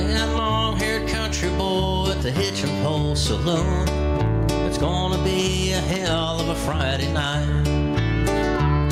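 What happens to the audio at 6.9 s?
At 6.9 s the level is pumping, as it does through the whole clip: the gain keeps dipping and recovering by about 5 dB. The likely cause is gain set too high with a fast limiter or compressor pulling it down on each loud sound. Unlike a noise gate, which cuts the background off in the gaps, this lifts it back up, and the result sounds squashed.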